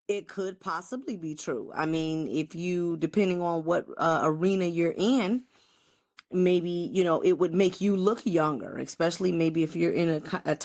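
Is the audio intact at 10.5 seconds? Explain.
Yes, the audio is intact at 10.5 seconds, with the speech carrying on cleanly through the call path.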